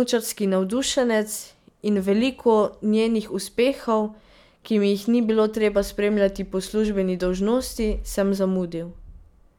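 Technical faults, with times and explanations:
No technical faults are heard in this speech clip.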